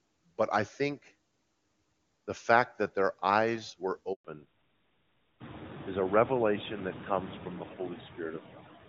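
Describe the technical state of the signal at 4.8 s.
Fallback to narrowband is under way at 4.8 s. It began at about 4.25 s, just after "that their eyes were", and lasts to the end. The call has dropped from HD Voice to a narrowband codec, consistent with AMR-NB at 12.2 kbit/s, so nothing above 4 kHz survives and the speech sounds duller and rougher.

Noise suppressor artifacts are also present here, as throughout. The suppressor pulls steady background noise down by about 17 dB frame by frame, so residual noise dips between words and swells beneath them.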